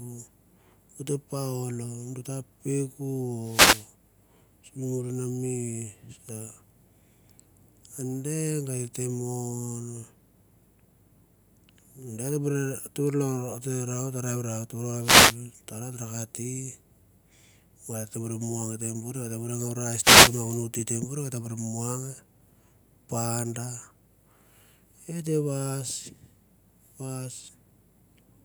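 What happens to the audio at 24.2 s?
Nothing goes wrong at 24.2 s; the speech carries on intact through that moment.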